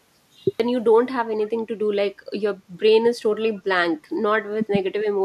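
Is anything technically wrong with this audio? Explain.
Yes, there are three faults.

The first is a cut-off start. The clip opens with digital silence from 0.0 s to 0.60 s, and the speech then begins abruptly at 0.60 s, mid-sound, with no natural onset or fade-in. This is what happens when capture or streaming begins late: the first samples that arrive already sit partway through an utterance, so the attack of that sound is missing and the transition from silence to speech is a hard edge.

The second is speech suppressed in double talk, between 3.04 s and 3.09 s. The level dips sharply, roughly 10 dB at its deepest, over about 50 ms, then recovers. The likely cause is an echo canceller that could not separate the near-end talker from loudspeaker echo while both sides were active. It responded by attenuating everything, briefly pushing the talker's own speech down along with the echo.

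The third is an echo leak, from 3.37 s to 3.41 s. A faint, delayed copy of earlier speech comes through, trailing the original by 493 ms and sitting about 30 dB below the main speech. It is a short, low-level scrap rather than a sustained repeat. This likely comes from a far-end loudspeaker path whose echo canceller left residual pickup in the microphone signal, which was then sent back into the call.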